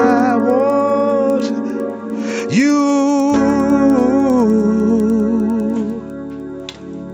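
Right through the audio there's a steady tick at 10 per second, riding on the sound and dropping out in the gaps. That's the signature of a resampler restarted on every block. Each chunk got converted in isolation, so the filter had no real neighbours at the edges and left a small error at every seam. The spacing fits 100 ms blocks, and the top end suggests an upsample from 16 kHz to 48 kHz.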